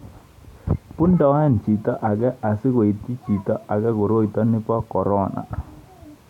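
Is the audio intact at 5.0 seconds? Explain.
Yes, at 5.0 seconds the speech is intact, with no dropout, click, distortion or other fault at that moment.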